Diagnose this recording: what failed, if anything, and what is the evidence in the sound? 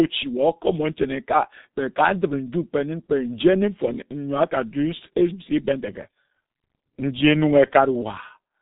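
Muffled, hoarse speech with smeared consonants runs the whole way through, and nothing sounds above 3.8 kHz. This is heavy G.723.1 codec damage: its 30 ms frames and slow voice-model updates blur fast articulation, and the thinness fits roughly 6 kbit/s.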